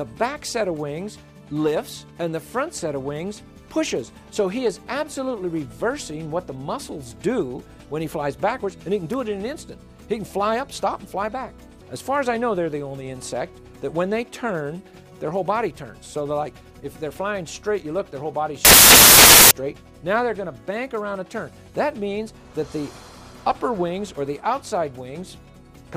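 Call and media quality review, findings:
Samples built from the wrong bytes, 18.65–19.51 s. Symptom: sudden loud, harsh broadband noise for about 0.86 s, close to white on loud sounds. Probable component: sample reader/decoder. Mechanism: byte offset, swapped byte order or misalignment promotes fast-changing low bits into the high part of each sample. Distinguishing point: unlike dither or hiss, the noise is loud and harsh rather than sitting at a low constant floor.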